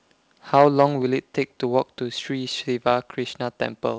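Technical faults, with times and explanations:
0.54 to 0.85 s, microphone overload. The loudest stretch of speech turns harsh and crackly, with a gritty edge on its peaks. The waveform tops are flattened, and only a small share of samples, around 3 percent, were clipped at the converter's limit. The likely cause is a microphone input level set too high, driving peaks about 5 dB past the converter's limit. Because the cut-off tops add hard edges, the crackle remains audible through the band-limited call audio, which carries nothing above 8 kHz.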